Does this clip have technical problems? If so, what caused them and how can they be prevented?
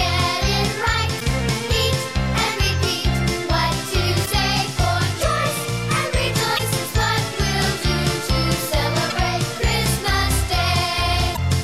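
Yes. Damaged data in a compressed stream causes brief glitches at 1.16–1.22, 4.22–4.28, 6.55–6.60, 9.10–9.12 and 11.33–11.38 s: corrupted bytes make the decoder misread frames and lose sync until the next header. Checksummed transport and verified file transfers prevent it.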